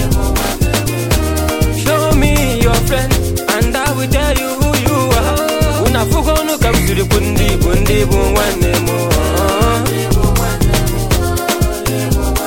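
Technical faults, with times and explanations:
Nothing stood out on listening; no technical fault could be heard anywhere in the recording.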